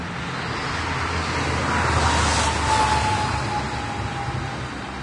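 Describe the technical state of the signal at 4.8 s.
At 4.8 s the audio sounds like it's been through heavy lossy coding, likely Vorbis compression, and that holds for the whole clip, not just this moment. Nothing gets through above 10.6 kHz, and the treble below that is quantised so coarsely that fine detail turns to grainy hiss of about the same energy. Tones come out roughened and attacks smeared, which fits a low-rate stream of around 31 kbps.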